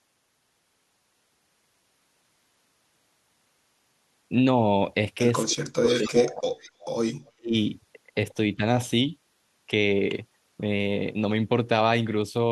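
From 5.45 to 6.48 s the speech drops out heavily, by about 40 dB at its deepest. That's likely speech suppressed in double talk: with both ends talking, the echo canceller couldn't tell the near talker from loudspeaker echo and ducked everything. Inside that stretch, 5.87 to 6.25 s, there's an echo leak, a copy of the speech about 282 ms late at roughly the same level as the speech. Another one at 6.51 to 6.71 s sits around 285 ms behind and about 10 dB down. The far end's canceller likely let its loudspeaker pickup slip back through. The ducking returns at 6.81 to 6.91 s (about 15 dB), 7.26 to 7.54 s (about 40 dB, near-cutout), and faintly at 8.56 to 8.62 s (about 5 dB).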